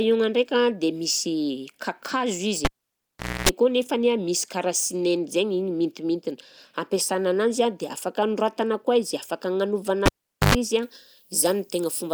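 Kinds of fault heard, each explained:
cable pulled and plugged in: A live connection is broken and remade, leaving a pop, near silence, a burst of hum while only the tip touches, then a second pop. It happens at 2.65 to 3.49 s, with about 0.79 s gone and about 0.27 s of 60 Hz buzz, and at 10.06 to 10.55 s, just after "anoratana koa izy afaka", with about 0.44 s gone and 50 Hz buzz. The mains buzz and bracketing pops set it apart from a plain dropout.
pre-emphasis left on: From 10.83 s to the end, the treble boost applied before transmission is never undone, so high frequencies sit about 13 dB above 1 kHz at 10 kHz. The sound turns thin, bright and hissy with sharp sibilance. The lift is a smooth shelf climbing from around 2 kHz, which fits an uncorrected 75 µs FM curve. It is not a narrow resonant peak or added distortion, and it starts at a clear point rather than running through the whole clip.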